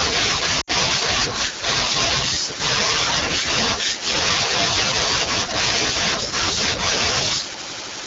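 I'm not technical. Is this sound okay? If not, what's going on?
No, there are two problems. The whole clip has gone through the AMR wideband (HD Voice) codec, the squeezing a mobile network uses for calls. It's running at one of its lowest settings, so the speech sounds rough and raspy throughout. The codec rebuilds the voice from a simple model of pitch and mouth shape plus filler hiss for the top end, and at this low setting there isn't enough detail to make that sound natural.

There are also lost AMR speech frames from about 0.61 to 0.71 seconds. For roughly 60 ms, about three small chunks of the call didn't arrive intact, likely because of radio errors. The phone covered the gap by repeating the last good sound while turning it down, so you hear the sound fade quickly to near silence there. The voice then picks up again and sounds a bit weak or rough for a moment.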